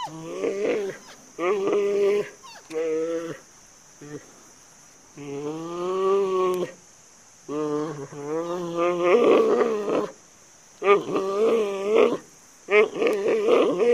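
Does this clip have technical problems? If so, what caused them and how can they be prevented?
Yes, there are two bit error spikes: single sharp ticks at 6.54 s and 13.13 s. The first is one sample jumping to about -8 dBFS and the second is two samples peaking near -14 dBFS. Both snap straight back. A flipped bit somewhere in memory or on a digital link pushed the value off by a power of two, so each tick is broadband and has nothing to do with the surrounding sound. To prevent it, use error-checked transfers and reliable cabling, and verify copies against checksums.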